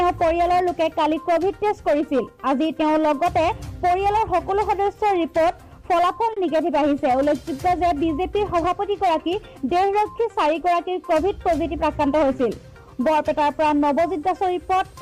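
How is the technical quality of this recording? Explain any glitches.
One glitch stands out: at 6.33 to 6.38 s the sound briefly hangs, as if a moment were held a little too long, with a faint buzzy, slightly dipped quality before it carries on. This is a short stall from a late packet. A packet missed its playout time, the jitter buffer ran dry, and the receiver stretched the last audio for about 30 ms until it arrived. Nothing is lost; playback simply resumes about 30 ms later than before.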